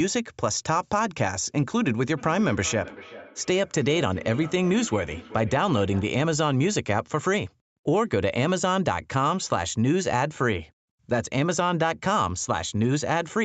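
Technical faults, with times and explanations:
2.17 to 6.18 s: feedback echo between two devices. A second device in the same room on this call plays back what this microphone sent, and the microphone picks that playback up again. This device's echo canceller only removes its own output, so the returning sound goes through. The speech comes back roughly every 0.4 s, peaking at about 17 dB below the direct speech, with the same 8 kHz top limit as the rest of the call audio.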